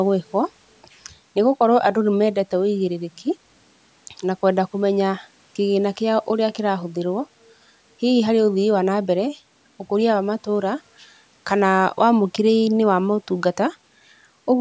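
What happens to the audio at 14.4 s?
Nothing goes wrong at 14.4 s. The speech there carries on intact, with only the normal high-pass of call microphone processing trimming the lowest bass.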